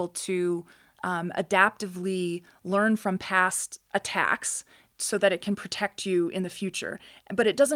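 Nothing stood out on listening to this recording of speech.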